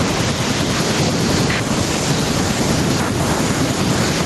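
Gain pumping runs through the whole speech clip. The gain swings by roughly 5 dB. Loud and soft parts sit squashed together. The likely cause is input gain set far too high, with a fast limiter pulling it back down.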